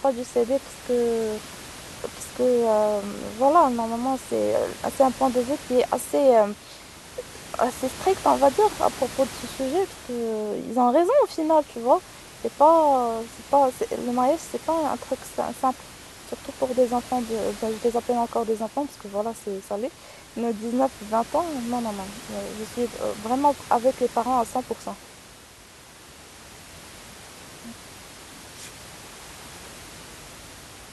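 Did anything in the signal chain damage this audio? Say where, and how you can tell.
No, nothing in the chain has harmed this speech recording; the only thing under it is the room's own background noise, sitting about 18 dB below the speech, and that was picked up by the microphone rather than added by the system.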